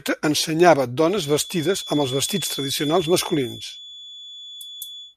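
A speech clip with a feedback whistle. From 1.03 s to the end, a thin, steady tone near 3.4 kHz sits about 15 dB below the voice, swelling and fading slowly in level. A loudspeaker-to-microphone loop held just at the edge of feedback is the likely cause.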